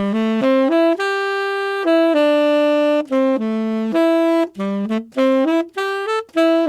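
No audible technical faults.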